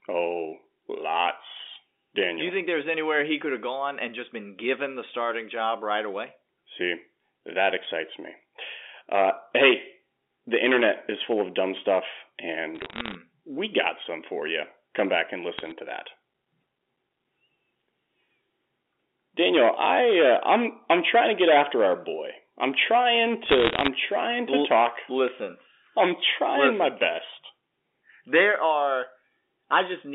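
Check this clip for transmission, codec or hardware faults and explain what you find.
Three bursts of bit errors on a digital phone line stand out. At 12.75 to 13.16 s (after "full of dumb stuff"), 15.58 to 15.72 s and 23.46 to 23.88 s, flipped bits in the G.711 stream corrupt single samples, putting sharp ticks and crackle over otherwise intact telephone-band speech. The last burst, near 1 percent, crackles densest.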